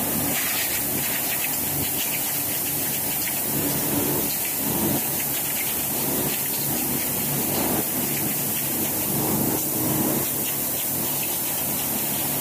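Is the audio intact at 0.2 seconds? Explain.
No. At 0.2 s, as across the whole clip, low bit depth with noise shaping is present: the sound is rounded to about 3 bits, and that error is pushed upward, giving a steady, thin hiss tilted sharply toward the top of the band, unlike flat broadband noise.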